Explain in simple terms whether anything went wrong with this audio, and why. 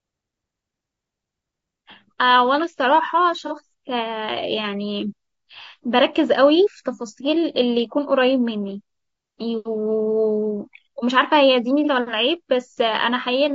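Throughout, the speech sounds rough and grainy, with a thin, artificial top end, likely from low-delay AAC compression squeezing the voice into very short, data-starved chunks.

At 3.47–3.52 s and 11.84–11.89 s there's a brief smeared, noisy blip: AAC frame loss with concealment, where a missing 30 ms slice was guessed from the sound just before it.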